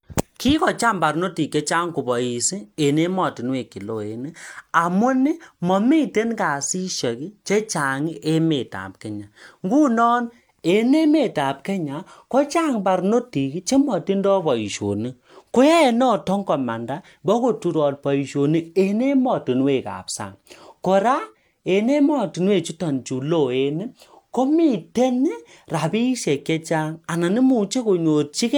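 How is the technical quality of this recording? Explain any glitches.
Listening to the recording, nothing stood out as a technical problem or glitch.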